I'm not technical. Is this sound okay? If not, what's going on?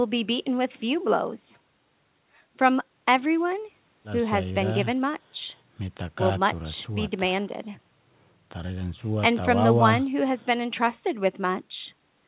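Yes, nothing stood out on listening; the speech has the narrow sound of an ordinary phone call, with nothing above about 4 kHz, which is simply how this kind of call line carries audio.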